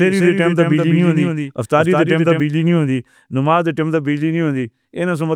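From the very start until 2.4 s, the speech is shadowed by a dry copy about 5 dB quieter trailing about a fifth of a second behind, which then cuts off abruptly. This doubled audio track likely comes from a second, slower capture path.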